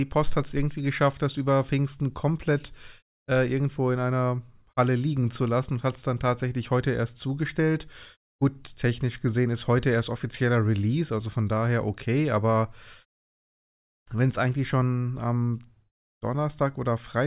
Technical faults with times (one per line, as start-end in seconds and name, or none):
none